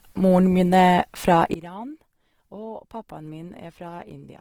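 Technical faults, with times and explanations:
Throughout: Opus compression. The speech has a rough, grainy texture and plainly audible coding damage. This likely comes from Opus in its music (CELT) mode at about 16 kbps. At that rate the encoder runs short of bits, but it still keeps each band's energy by filling starved bands with noise or folded copies of lower bands. So there are few spectral holes, but detail turns hissy and coarse. The bandwidth stays full, with nothing above about 20.2 kHz.
1.54 s to the end (4.41 s): one channel inverted. Right after "min er fra", the speech drops by about 18 dB. The likely cause is one stereo channel switching to reversed polarity while the two are summed to mono. Everything common to both channels, which includes the centred speech, cancels. Only the small difference between the channels survives, and that leaves a faint remnant until the clip ends.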